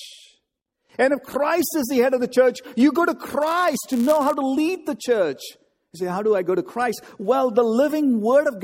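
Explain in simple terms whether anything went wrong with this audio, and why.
From 3.41 to 4.34 s, between "church you go to" and "to lead the church", a steady buzz of about 100 Hz rides on the speech, which drags very slightly. This is a block size mismatch (padded): each chunk of audio arrives slightly short, and the gap is filled with silence.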